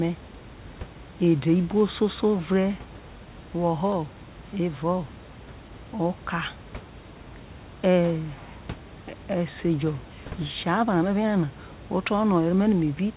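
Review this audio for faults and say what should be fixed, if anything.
No faults; nothing needs fixing.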